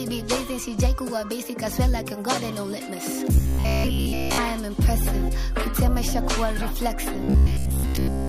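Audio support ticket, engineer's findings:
Robotic sound from repeated short buffers: 3.36–4.38 s throughout, 7.13 s to end for most of it. Rigid 66.7 Hz metallic buzz. Likely underrun looping a 15 ms block while new audio is skipped. Spectrogram shows a harmonic comb at 66.7 Hz spacing; waveform shows identical 15 ms cycles.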